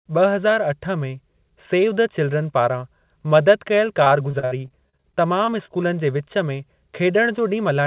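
From 4.04 to 5.70 s the speech breaks up with repeated packet loss, giving a robotic sound. Thirteen short gaps arrive in quick succession, the longest about 63 ms. Each hole is bridged by stretching the sound just before it. That concealment accounts for 338 ms, about a fifth of the stretch, and a further 240 ms is simply missing. The result is choppy, buzzy speech with pieces dropped. Nothing sits above 4 kHz, which fits narrowband G.711 at 64 kbps.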